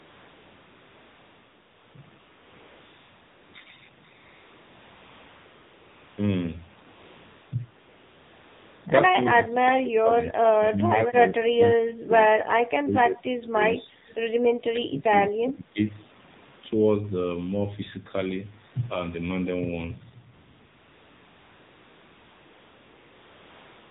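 AMR narrowband mobile codec, throughout the clip: the speech has been squeezed through a mobile speech coder that rebuilds the voice from a vocal-tract model excited by a handful of pulses per subframe. Nothing survives above 4 kHz, so the sound is dull and boxy. The buzzy, synthetic edge is plainly audible, which fits one of the lower AMR-NB modes, around 7.4 kbps, where too few bits are left to capture the natural texture of the voice.

AMR comfort noise, from 0.00 to 1.94 s, 2.20 to 3.54 s, 4.16 to 6.18 s, 6.92 to 7.52 s, 7.80 to 8.86 s, and again from 20.34 s to the end: in each stretch the sending phone decided nobody was talking and stopped transmitting speech frames. The receiving end painted in a smooth, even hiss built from a rough sketch of the background's level and spectrum. Because of this, the real room tone vanishes and a flat artificial noise switches on and off around the speech.

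Speech suppressed in double talk, from 9.14 to 12.12 s, 13.77 to 14.25 s, 14.70 to 15.14 s and 15.31 to 15.79 s: the voice sinks sharply, by about 25 dB in the first two stretches and about 20 dB in the last two. The likely cause is both parties talking at once, leaving the echo canceller unable to tell the near talker from loudspeaker echo, so it pulled everything down.

Echo leak, from 14.09 to 14.14 s: a brief, faint ghost of the voice slips through, trailing the original by 177 ms and sitting about 35 dB below it. It is only a short scrap, heard inside the second suppressed stretch. This is likely residual echo that an echo canceller failed to remove after its loudspeaker output was picked up by its own microphone and sent back down the line.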